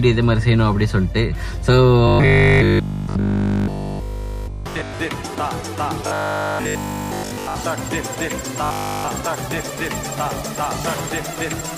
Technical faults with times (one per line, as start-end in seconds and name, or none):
2.08-5.00 robotic sound from repeated short buffers
6.07-7.57 robotic sound from repeated short buffers
8.64-9.08 robotic sound from repeated short buffers